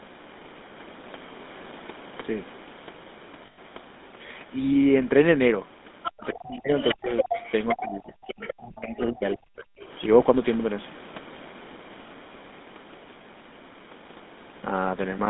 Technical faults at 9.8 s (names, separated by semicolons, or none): GSM full-rate codec; speech suppressed in double talk; other side's voice leaking through